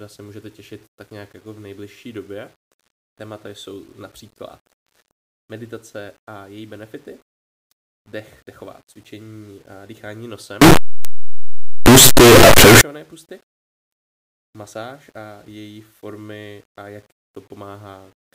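Signed and unsigned mixed up, 10.62 to 12.81 s into this speech clip, right after "dechová cvičení a dýchání": the sound becomes a loud, harsh roar with quiet moments as loud as the rest. Likely the 8-bit samples were read with the wrong sign convention, flipping the top bit so every zero crossing jumps across the full range.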